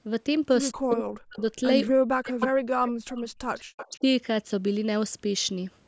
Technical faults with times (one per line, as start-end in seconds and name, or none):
0.78-3.55 speech suppressed in double talk
2.40-2.47 echo leak
2.86-2.90 echo leak
3.55-3.99 echo leak
3.85-4.04 speech suppressed in double talk